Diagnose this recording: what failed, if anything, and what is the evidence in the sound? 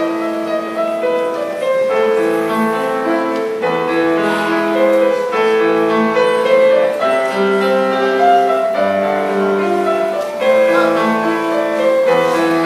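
Crude rate conversion at the sample-format stage from 10.13 s onward drops or repeats samples unfiltered, consistent with 48 kHz to 44.1 kHz, leaving a gritty, inharmonic fizz roughly 30 dB down.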